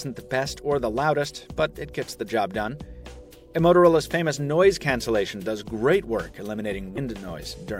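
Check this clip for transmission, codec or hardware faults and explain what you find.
One fault stands out, near the end of the clip. From 6.94 to 6.98 s there is damaged data in a compressed stream. A short stretch of the encoded data was corrupted, so the decoder misread those frames, lost sync and had to hunt for the next valid frame header. It comes through as a brief disturbance of about 40 ms, the kind heard as a chirp, squawk, click or short hole. Unlike a clean dropout, which is simply silence, this comes from the decoder losing its place in the stream.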